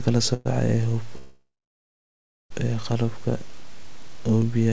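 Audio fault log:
0.34–0.47 s, call audio freeze: a brief buzzy smear holds the sound for about 0.11 s, then it carries on where it left off with nothing lost. This likely comes from packets arriving late and the jitter buffer running dry, so the receiver stretches the last sound across the wait.
1.17–2.52 s, call audio freeze: the sound stalls into a fading buzz that drops to silence for about 1 s before resuming intact, adding a 1.33 s gap. Delayed packets likely starved the jitter buffer again, with the high end stopping near 8 kHz throughout, consistent with a G.722 call path at 64 kbps.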